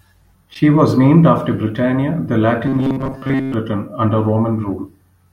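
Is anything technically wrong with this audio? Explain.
Yes. From 2.67 to 3.54 s there is robotic sound from repeated short buffers. Audio likely arrived too seldom, so playback kept looping a fragment of roughly 7.5 ms for most of that stretch while real audio was skipped. This imposes a fixed 133 Hz buzz, making the speech rigid and metallic.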